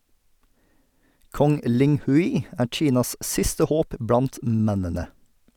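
No technical faults can be heard anywhere in this recording.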